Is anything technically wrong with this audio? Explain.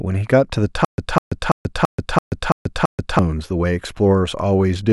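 Yes. Playback likely stalled from 0.85 to 3.19 s, causing a stutter with silent gaps: one 200 ms fragment repeats seven times, with 134 ms of digital silence between repeats.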